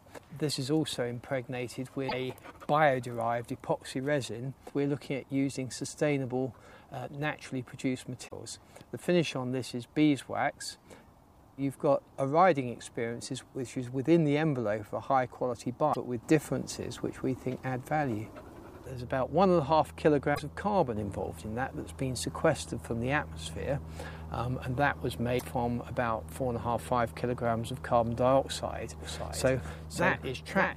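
Short bursts of damaged data in a compressed stream break through at 2.05–2.13 s, 8.24–8.32 s, 15.90–15.97 s, 20.31–20.40 s and 25.35–25.42 s, each lasting roughly 70 to 80 ms. At each one the decoder has hit corrupted frames, lost its place and hunted for the next valid header, so a brief chirp, squawk, click or short hole replaces the programme. On a spectrogram each shows as a narrow vertical disturbance.

From 29.00 s to the end, a doubled audio track appears. A second full-band copy of the audio enters abruptly, trailing the original by about half a second and sitting about 5 dB lower. It carries no reverberant tail or room colouring. The likely cause is an edit or a second, slower capture path that left two copies out of step. A spectrogram shows every pattern repeated half a second later at slightly reduced intensity, and the waveform's envelope gains a matching shadow.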